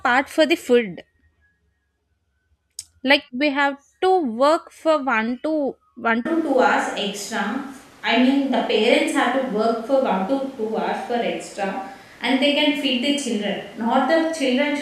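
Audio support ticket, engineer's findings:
From 6.26 s, right after "for one to one", the sound turns roomy and hollow and thins out at the bottom, and it stays that way to the end. Level holds about steady, but room noise jumps up to roughly 30 dB under the speech. Hard cut, no fade. Likely a switch to a distant microphone: the close mic dropped out and a far pickup took over, so the room shows up in the recording.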